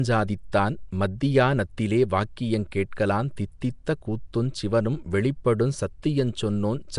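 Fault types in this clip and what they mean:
Nellymoser compression: The speech carries a rough, hissy halo and a smeared, underwater quality all the way through, and nothing comes through above about 10.6 kHz. That texture is most likely Flash's old Nellymoser Asao microphone codec, which works in short blocks with very few bits per sample and fills the bands it starves with noise. The damage is plainly audible, and the sound fits a rate of around 44 kbps.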